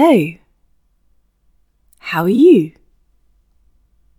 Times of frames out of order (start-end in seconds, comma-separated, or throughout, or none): 0.95-1.00, 2.33-2.39